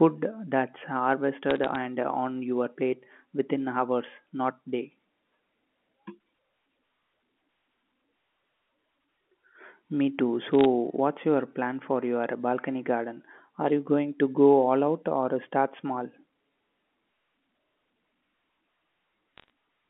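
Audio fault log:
1.51–1.75 s, 10.61–10.65 s, 13.68–13.72 s and 19.38–19.50 s, bit errors on a digital phone line: on this G.711 A-law line, a fraction of a percent of transmitted bits flipped in short bursts, each flip corrupting a single 8-bit sample. Where a high-order bit, or the sign of a loud sample, is hit, that sample jumps far from its neighbours, giving a sharp tick. Clustered together, the ticks form brief crackle laid over the speech, which itself passes through unchanged.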